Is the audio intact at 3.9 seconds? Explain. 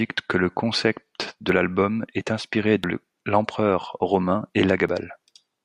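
Yes, the audio is intact at 3.9 seconds, with no audible fault at that moment.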